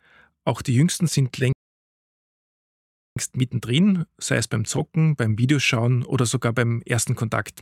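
At 1.52 s the sound cuts off abruptly in mid-flow and the output stays completely silent until 3.17 s, a gap of about 1.6 s, before the audio picks up again. This is a playback stall, likely caused by the player running out of buffered data or by its playback thread being blocked. Either way, it had nothing to send to the output for that stretch, and the audio continued only once it recovered.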